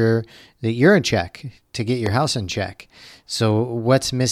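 At 2.06 to 2.08 s, between "in check to get" and "house in check", a single loud pop cuts through the speech, which carries on beneath it. Its likely cause is a sudden voltage step or pulse from a plug, switch, static discharge or driver glitch entering the signal path. It peaks roughly 10 dB above the speech. On a waveform it shows as a narrow spike, and on a spectrogram as a thin vertical broadband stripe.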